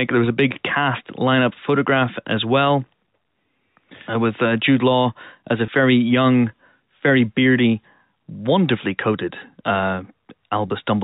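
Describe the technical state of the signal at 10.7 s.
At 10.68 to 10.70 s there is packet loss with pitch repetition: about 20 ms of audio is missing, which fits one lost packet. The receiver fills the gap by repeating the last pitch period, heard as a brief held, slightly buzzy tone.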